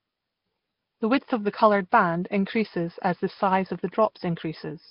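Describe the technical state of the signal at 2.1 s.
At 2.1 s the speech carries the same damage heard across the whole clip, most likely Nellymoser compression. The codec handles short blocks at a fixed, very small bit budget, which fits a rate near 22 kbps. Weaker bands get no bits and are refilled with noise, so the speech has a rough, hissy halo and a smeared, underwater texture. Nothing reaches above 5.3 kHz, leaving the top end dull and closed.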